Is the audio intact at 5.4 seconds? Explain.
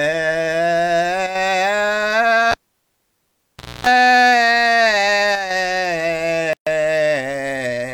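No. At 5.4 seconds the music sits inside a brief one channel drop-out, running from 5.35 to 5.50 s. One stereo side has likely cut out for that moment, so in the mono sum the shared material falls abruptly by about 6 dB and anything carried only on the missing side vanishes. On a waveform this shows as a sudden, flat-topped dip in amplitude with sharp edges; a spectrogram shows a short, uniform darkening across all frequencies.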